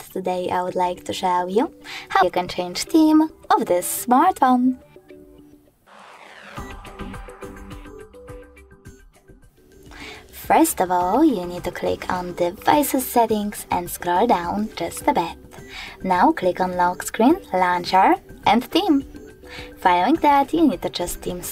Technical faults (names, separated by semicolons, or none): compressed frames skipped